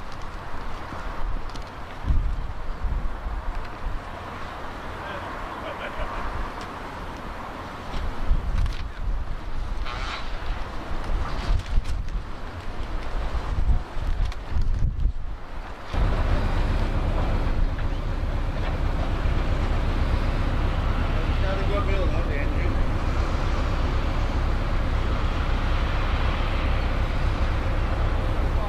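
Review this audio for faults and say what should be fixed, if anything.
No faults found; nothing needs fixing.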